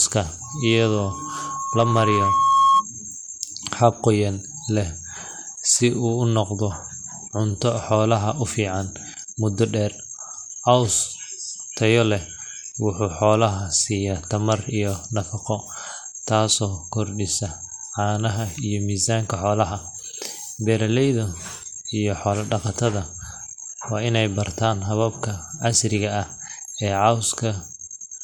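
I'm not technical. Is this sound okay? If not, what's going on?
No. Loudspeaker feedback squeal, 0.44 to 2.85 s: the microphone picks up its own loudspeaker, so a 1.1 kHz tone loops and swells into a shrill whistle.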